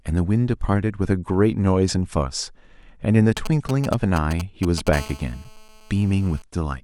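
Speech, with GSM signalling bursts from 3.37 to 4.89 s: galloping dit-dit-dit groups of short 217 Hz buzzes, fairly loud against the speech. The gaps between groups separate them from a call's continuous buzz. A steady GSM phone buzz follows from 4.93 to 6.42 s, a hard, raspy 217 Hz tone rich in harmonics about 21 dB below the speech. It comes from a nearby phone in a call, rectified by the audio circuit, and its unbroken 217 Hz rate distinguishes it from mains hum.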